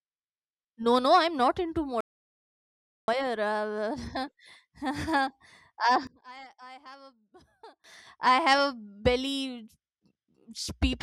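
Right after "not into", at 2.01 s, the speech drops out to complete silence until 3.08 s, about 1.07 s of nothing at all, not even room tone underneath. That's an audio dropout to silence. The likely cause is the input being lost for a moment, a disconnected device, a failed link or an accidental mute, while the recorder kept writing silence. Whatever was said in that gap isn't recoverable.

From 6.07 s to 7.84 s the speech sinks by about 26 dB and turns faint, as if someone turned it most of the way down. That's the signature of one channel inverted. With one stereo side likely flipped in polarity, the centred speech common to both channels cancels when they're summed to mono, leaving only the small difference between them. Then the full level returns at 7.84 s.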